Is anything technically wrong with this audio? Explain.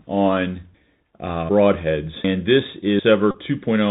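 Yes. Bluetooth CVSD headset codec damage runs throughout: the speech is confined below 4 kHz, with scratchy s sounds, distorted loud peaks and a granular hiss underneath, which fits a 64 kbit/s stream.

Audio missing between chunks occurs at 1.49, 2.24 and 2.99 s. About 300 ms of speech vanishes at each abrupt join, likely from a recorder losing audio between one-second chunks.

A Bluetooth headset packet repeated run from 3.31 to 3.37 s replays the same short packet every 3.75 ms, producing a steady buzz near 267 Hz.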